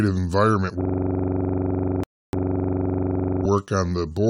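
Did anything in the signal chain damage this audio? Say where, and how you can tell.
Yes. From 0.81 to 3.45 s the speech freezes into a 23.4 Hz machine-gun stutter, one 42.67 ms slice repeating 55 times. This is a system hang loop at the driver or buffer stage: the hardware kept replaying one buffer, which fits a 2048-sample buffer. Roughly two seconds are lost.

From 2.04 to 2.33 s, inside that stutter, the audio drops to silence for about 297 ms, then resumes exactly where it stopped. This is a rebuffering stall at playback: the player ran out of received data and waited. Nothing is lost, but time is added.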